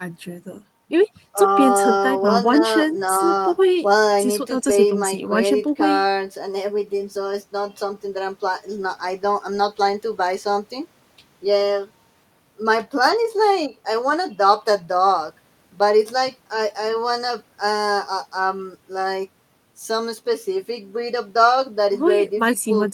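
No technical faults are audible.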